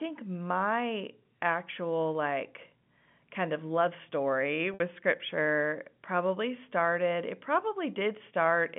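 A telephone-band speech recording with two faults. From 2.29 to 6.92 s a steady low 60 Hz drone sits roughly 25 dB under the speech; this is mains hum, with power-line current leaking in through a ground loop or nearby transformer. At 4.74 to 4.80 s the sound briefly locks into a held, buzzy tone before resuming: packet loss with pitch repetition, where about 60 ms of data went missing, consistent with several short packets dropping together, and the receiver looped the last pitch cycle to cover the gap.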